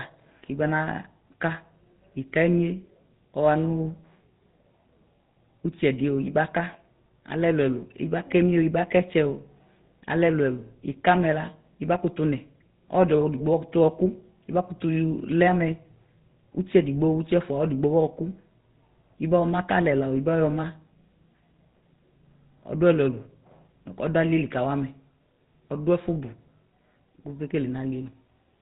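The speech has a buzzy, gravelly roughness from start to finish, with nothing above 4 kHz, which fits the GSM full-rate codec at around 13 kbps. It rebuilds the voice from a vocal-tract model fed by a coarse, regularly spaced pulse excitation, and the damage is plainly audible.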